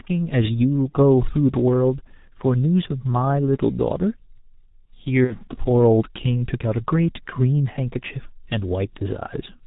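Throughout, the speech carries heavy G.723.1 codec damage: nothing above 4 kHz, slow model updates, muffled hoarse tone and smeared consonants, consistent with roughly 6.3 kbit/s. At 0.89 s and 5.24 to 5.35 s, VoIP packet loss concealed by the speech codec stretches the sound into a buzzy tone or coloured noise that fades, pointing to one and then two lost 30 ms frames.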